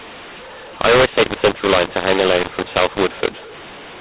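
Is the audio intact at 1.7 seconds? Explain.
No. At 1.7 seconds, as across the whole clip, the speech shows mu-law and A-law mixed up: samples coded as mu-law are decoded as A-law. The mismatched curves scramble levels, making the speech harsh and distorted and lifting pauses into noise.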